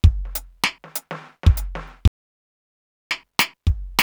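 At 2.08 s the music cuts to dead silence for about 1.03 s, resuming at 3.11 s: an audio dropout to silence, likely from a lost input.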